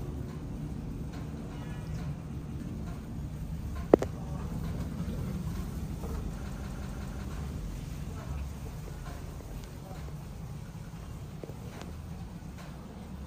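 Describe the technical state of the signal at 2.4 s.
From 2.42 to 2.60 s a stretch of sound about 186 ms long plays twice with a hard join, a short stutter. This is a repeated buffer: new audio arrived late, so the last block, which fits an 8192-sample buffer, was replayed and about a fifth of a second of the original audio was lost.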